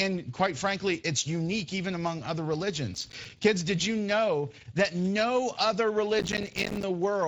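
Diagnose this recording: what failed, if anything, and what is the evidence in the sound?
Codec stage: Speex coding leaves the speech noisy and hoarse throughout, with nothing above 7.7 kHz, at 16.8 kbps.

Driver or buffer stage: processor overload crackle from 2.94 to 3.44 s and 6.19 to 6.83 s. Missed buffers of roughly 5 ms drop to silence, producing gritty tearing that is denser in the second burst.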